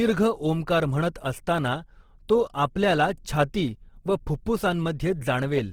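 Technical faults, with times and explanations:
Throughout, Opus compression: the speech sounds rough and grainy, with a noisy fizz where clean detail should be, and the bandwidth still reaches about 20.3 kHz. The likely cause is an Opus encoder in music mode, short of bits at around 16 kbps, refilling bands with folded or noise content.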